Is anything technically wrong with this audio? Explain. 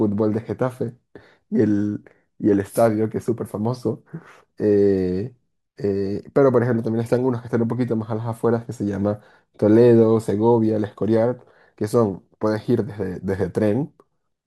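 No, nothing technically wrong can be heard here.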